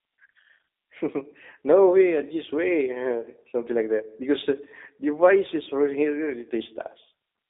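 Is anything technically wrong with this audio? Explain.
Yes. Throughout, the speech sounds thin, slightly rough and synthetic, with nothing above 3.8 kHz. This fits the G.729 codec at 8 kbit/s, which rebuilds speech from a vocal-tract model and sparse pulses.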